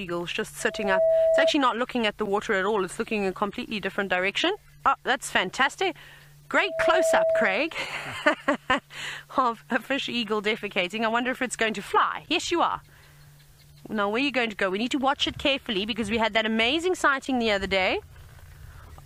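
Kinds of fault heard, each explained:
Loudspeaker feedback squeal: the microphone picks up its own loudspeaker, and around 651 Hz the loop gain exceeds one, so that tone grows on its own. It swells over a fraction of a second to about 5 dB above the programme, from 0.60 to 1.53 s and 6.53 to 7.83 s.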